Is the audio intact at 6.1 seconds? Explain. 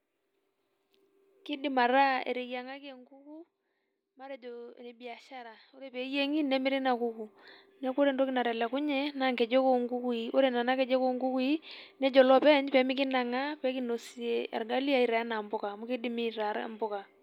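No. Zipper noise runs from 5.87 to 6.25 s: a roughly 20 dB level change applied in 1 dB steps, about a hundred per second, so each step ticks audibly, zipping over the speech.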